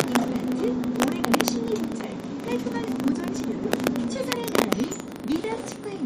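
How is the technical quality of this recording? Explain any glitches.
The recording is technically poor, with a steady processing buzz throughout and four bursts of harsh cracking on the loudest passages.

A filter restarted on every block runs through the whole clip. Because the filter loses its state at each block boundary and starts from silence, every block opens with a small transient. These add up to a 25 Hz buzz whose loudness rises and falls with the sound. Unlike a hum, it tracks the signal level rather than staying constant.

Integer overflow occurs at 0.00 to 0.16 s, 1.02 to 1.48 s, 3.73 to 3.87 s and 4.32 to 4.73 s, where peaks exceed the limit by about 1 to 2 dB. Instead of being held at the maximum, those samples wrap around to the opposite extreme. The result is violent cracks, far sharper than the flattened, fuzzy distortion of ordinary clipping.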